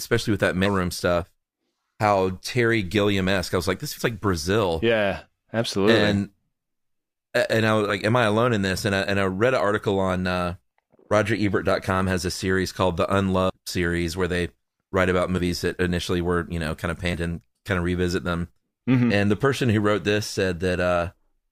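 Compressed frames skipped six times: at 0.65 s after "with that", 3.97 s after "I was like this", then 7.89, 13.49 and 15.37 s, and 17.13 s between "you know kind of" and "and kind of revisit". Each time whole frames never reach the output, so the speech jumps ahead by under a tenth of a second up to about a fifth, consistent with 20 ms frames.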